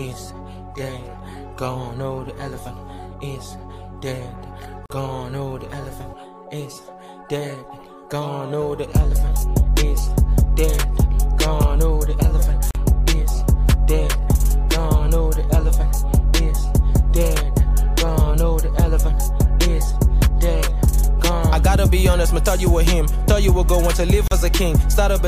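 At 4.86 s, 12.71 s and 24.28 s the sound drops out for about 44 ms, 42 ms and 38 ms. Each is a gap at a join of encoded pieces. The pieces were encoded separately and butted together untrimmed, so each encoder's start-up delay and final padding survive as silence. On a waveform each gap is a flat stretch with smeared, tapering edges. A spectrogram shows a clean vertical blank band, slightly blurred at its borders, before the sound resumes unchanged.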